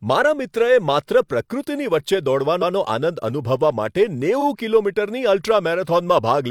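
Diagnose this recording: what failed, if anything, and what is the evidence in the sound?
Codec-stage repeated frames: a 128 ms block replays once at 2.58–2.71 s, after "પ્રકૃતિની વચ્ચે", and a 43 ms block at 4.37–4.43 s, each an audible stutter.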